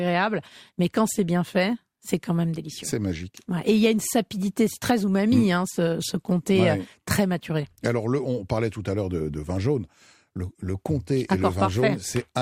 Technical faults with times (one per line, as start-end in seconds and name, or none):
none